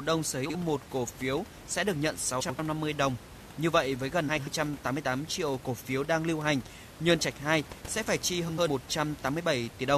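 Frames out of order: neighbouring runs of frames were decoded swapped at 0.45–0.56 s (46.4 ms blocks) and at 2.40–2.60, 4.28–4.48 and 8.48–8.68 s (92.9 ms blocks). Each stretch plays its halves exchanged: a garbled flutter with no lost time, heard above room noise about 18 dB below the speech.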